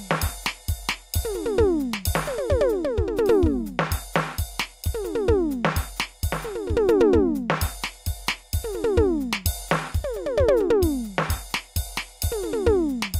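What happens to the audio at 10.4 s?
Nothing goes wrong at 10.4 s: the music plays straight through that moment with no audible fault.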